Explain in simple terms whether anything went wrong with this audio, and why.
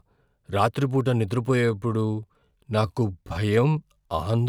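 A time-stretched section runs from 1.49 s to the end of the clip. From that point the speech suddenly slows to about 0.72 times its normal pace, yet the pitch stays the same, so it sounds drawn out. The likely cause is software lengthening that stretch of audio to fill a set length, keeping the pitch steady by repeating tiny slices of sound.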